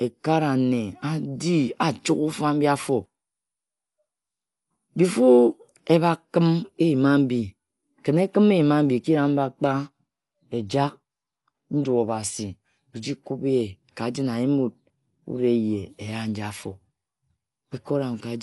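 Throughout the speech, nothing sounds above about 11.4 kHz, so it comes across dull. A rough, fluttering noise clings to tones. This is likely Dolby Digital compression at a low bitrate, near 64 kbps. Starved frequency lines get filled with dither noise.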